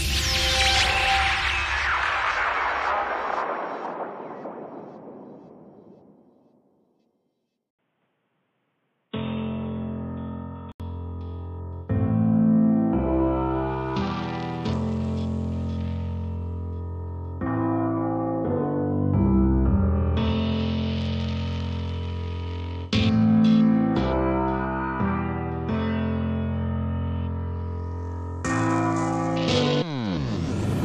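At 7.71 s there's an 80 ms gap, then the sound goes boxy with nothing above 3.8 kHz and a faint new noise floor until 10.8 s, likely the input switched to a poorer device.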